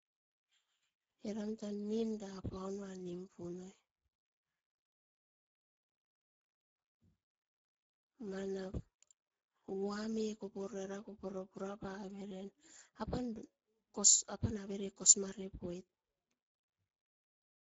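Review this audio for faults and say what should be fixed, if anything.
The whole recording, start to finish, carries Speex codec damage, and it's plainly audible. The speech comes across hoarse and grainy, which fits Speex running at a low bitrate, somewhere around 10 kbps. At that rate the codec has very few bits for the excitation signal, so the fine texture of the voice gets replaced by a rough approximation. Nothing is present above about 7.6 kHz, and the upper band sounds like a shaped noise fill rather than real detail. To prevent it, record or transmit with a higher Speex quality setting, or better a modern codec like Opus at a healthier bitrate.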